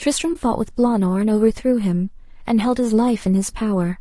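Across the whole speech clip the voice sounds rough and grainy, with noise between harmonics, likely from low-delay AAC compression at a rate near 32 kbps. From 0.33 to 0.37 s, AAC frame loss with muting leaves a soft-faded gap about 20 ms long, smoothed by overlapping windows.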